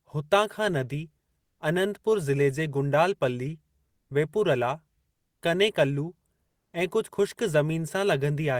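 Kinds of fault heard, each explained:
Comfort noise in place of the background: in three pauses, at 1.41, 5.13 and 6.47 s, for 0.18 to 0.28 s, the background becomes a flat, featureless hiss about 3 to 4 dB quieter, likely from Opus discontinuous transmission. Unlike a noise gate, the pause never drops to silence.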